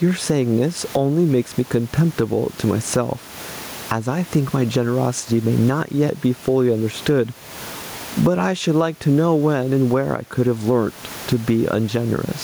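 Gain pumping runs through the whole speech recording. The swing is roughly 15 dB. The room noise sits about 31 dB below the speech. Loud and quiet passages sound pressed together. The likely cause is microphone gain set far too high, with a fast limiter or compressor clamping down on each peak.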